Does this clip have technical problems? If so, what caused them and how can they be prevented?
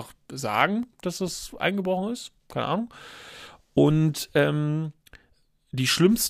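Yes. There are CD scratch ticks in this speech. Six short ticks fall between 0.61 and 1.73 s, about five per second. Each lasts only a few milliseconds. A scratch or blemish on the disc wiped out more data than error correction could rebuild. It passed the laser once per rotation. Each pass left a gap that the player interpolated or muted, which made a tick. Clean or resurface the disc before ripping, and use a secure ripper that rereads damaged sectors.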